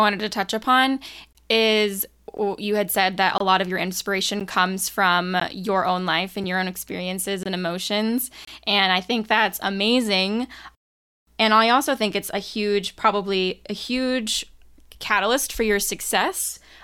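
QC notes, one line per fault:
1.33, 2.37, 3.38, 4.40, 5.40, 6.44, 7.43 and 8.45 s: gap between stream segments. Roughly once a second, a hard-edged silence of about 4.5 to 25 ms cuts into the speech, as the timestamps of consecutive 1-second segments fail to meet and the player pads the difference with zeros. Nothing is dropped, but each hole adds time. The waveform shows flat-line notches with abrupt edges, and the spectrogram shows thin vertical blank stripes across all frequencies.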